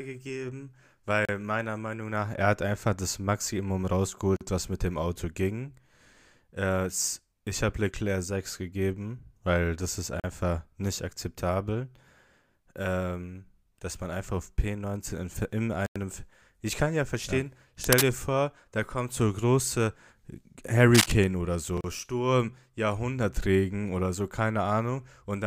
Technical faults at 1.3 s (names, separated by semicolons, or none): Bluetooth stall